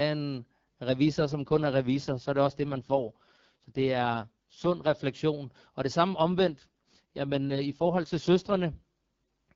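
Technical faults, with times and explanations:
1.06–4.97 s and 6.10–8.61 s, AMR rate drop: twice the speech turns rough, raspy and more synthetic for a few seconds, then clears again. There's no dropout and the bandwidth doesn't narrow. That's the network telling the wideband codec to step down its rate so more bits go to error protection. The raspiness fits a fall from the 12.65 kbit/s HD Voice mode, which sounds fairly clean here, to the 6.6 kbit/s mode, where the vocal tract model is starved of bits.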